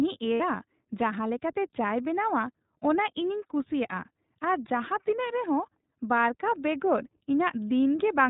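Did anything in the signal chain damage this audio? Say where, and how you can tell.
Yes. The iLBC codec colours the whole clip, and the damage is plainly audible. This is the codec stage. The speech is band-limited with nothing above 4 kHz, and its texture is slightly rough and synthetic. Each frame's excitation is coded independently, which trades some smoothness for robustness. The quality and framing point to iLBC's 15.2 kbps mode with 20 ms frames.

Lost iLBC frames appear from 0.34 to 0.41 s, a network-stage fault. For about 60 ms, which fits three consecutive 20 ms frames going missing, the speech turns into a held, faintly buzzy, breathy vowel. That sound is the decoder's concealment, which replays the last pitch cycle mixed with noise to fill the gap. Right after 0.41 s the speech is clean again, because each iLBC frame decodes without relying on the one before.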